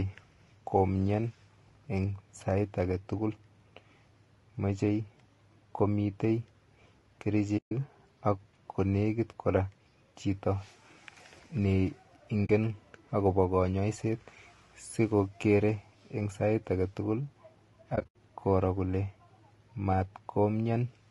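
Throughout the speech there is a plainly audible rough, grainy texture, with noise filling the gaps between the voice's harmonics and a thin, somewhat synthetic top band. This is likely low-delay AAC compression: AAC-ELD's short frames resolve pitch poorly, and the damage suggests a bitrate around 32 kbps.

At 7.57 s the sound fades out and returns at 7.72 s, just before "ak kolwkit kora", leaving a soft-edged 140 ms hole. A shorter 40 ms hole follows at 12.45 s. From 17.95 s to 18.15 s, just before "koro kole", several gaps are scattered over 200 ms, the longest around 70 ms. These are AAC frame loss with muting: the decoder zeroed the missing frames' spectrum, and the overlapping windows fade each gap in and out.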